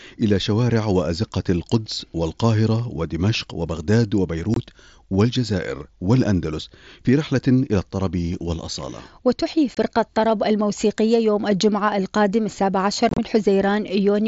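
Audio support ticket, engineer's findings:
Unconcealed Bluetooth headset packet loss:

4.54–4.57 s and 9.75–9.77 s: abrupt silent gaps of about 22.5 ms each. This fits three consecutive 7.5 ms frames dropped on the link between headset and phone.

13.09–13.18 s: chopped crackle, with 67.5 ms lost across 90 ms and a longest run of 30 ms.

The holes are empty, with no repeated or smoothed fill, which distinguishes this from concealed loss. The mSBC codec limits the band to 8 kHz throughout.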